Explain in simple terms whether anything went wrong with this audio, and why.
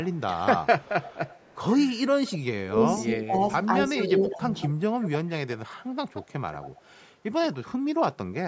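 A faint, delayed copy of the speech trails behind at 0.04–0.2 s, 0.82–1.57 s, 2.26–2.38 s, 3.99–4.05 s and 4.59–7.56 s. It lags about 205 ms at first and 175 ms later. This is echo leak, likely from a loudspeaker whose echo canceller let some sound slip back.

Between 2.28 and 4.43 s the talker's voice keeps dipping, about a second in total, while the other side talks. This is speech suppressed in double talk. With both sides speaking at once, the echo canceller likely turned the talker down along with the echo.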